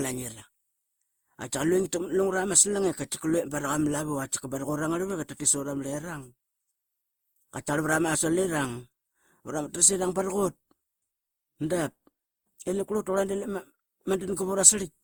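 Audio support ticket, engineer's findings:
Generation loss throughout, 0 to 15 s. Speech sounds swirly, hollow and smeared, with consonant attacks blurred. Likely cause: repeated Opus decode/re-encode, roughly five passes, at a rate that fits around 48 kbit/s. Each pass requantises on a shifted frame grid, so noise accumulates. What sets it apart: bandwidth still extends to about 20 kHz, so this is not a single low-bitrate encode, which would sound cleaner at this rate.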